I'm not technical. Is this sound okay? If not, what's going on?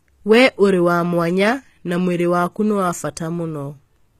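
No. Throughout, the speech has gritty, metallic s sounds and a synthetic-sounding top end, with nothing above about 14.9 kHz, likely from HE-AAC compression rebuilding the treble.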